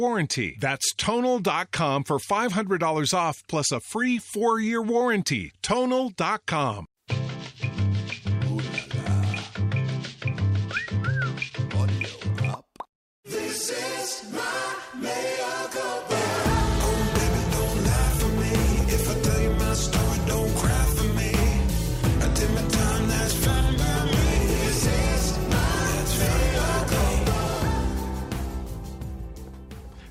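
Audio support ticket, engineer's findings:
No faults found on listening. Nothing heard points to a component needing attention.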